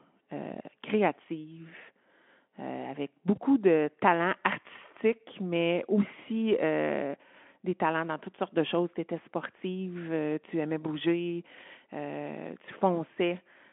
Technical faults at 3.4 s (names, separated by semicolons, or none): VoIP packet loss concealed by the speech codec